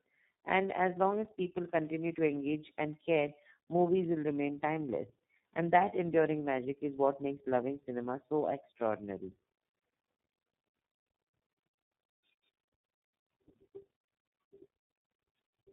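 Throughout this speech recording, tandem speech coding degrades the sound. It has been squeezed through two low-rate speech coders in succession, with a plain telephone-grade link between them. The character fits a G.723.1 stage at around 6.3 kbit/s followed later by iLBC. Because the second coder models speech that has already been damaged, the result is rough, muffled and warbly. On a spectrogram, nothing appears above 3.8 kHz, and harmonics look smeared and unsteady from frame to frame.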